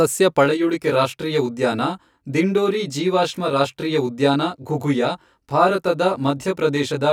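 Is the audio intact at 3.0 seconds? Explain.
No. At 3.0 seconds the speech has channel delay (comb filtering). It runs from 0.45 s to the end at 7.12 s. One channel arrives roughly 20 ms after the other, and the two are folded to mono. Parts common to both cancel at evenly spaced frequencies. The first notch sits down around 20 Hz. The result sounds rough or slightly doubled.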